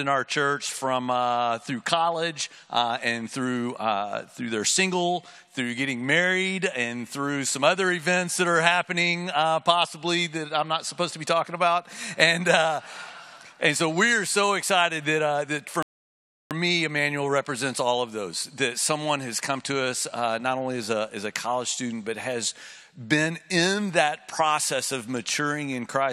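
At 15.83 s the player drains its store of downloaded audio and has to wait for more data to arrive, a rebuffering stall. The sound drops abruptly into silence and stays there until 16.51 s, then carries on from exactly the point where it broke off, with nothing skipped or repeated. The only cost is time: the gap inserts about 0.68 s of dead air, stretching the playback by that amount.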